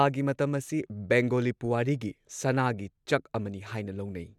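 Nothing stood out on listening to this speech recording.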